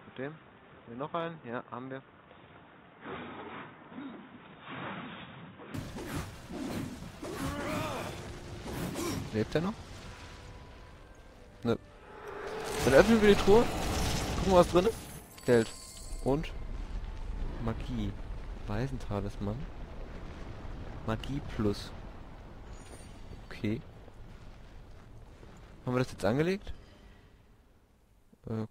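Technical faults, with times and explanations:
0.0–5.74 s, input likely switched to a poorer device: the sound is dull with nothing above 3.8 kHz, about 5 dB quieter, with a different background hiss well below it. It clears abruptly with no gap. Band, level and noise all changing together separate this from a simple filter.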